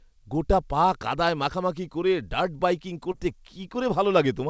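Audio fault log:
3.12–3.15 s, short concealed packet loss: after "মাখামাখি করে ডার্ট বাইকিং", 20 ms of speech went missing and the decoder extrapolated the preceding sound, leaving a brief smear.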